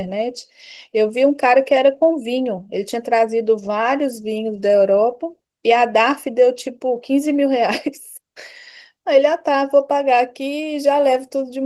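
No technical faults turn up anywhere in this speech recording; the Opus voice compression it passes through keeps the full audio band, and its light coding traces fit a hybrid setup running at roughly 20 kbps in 20 ms frames.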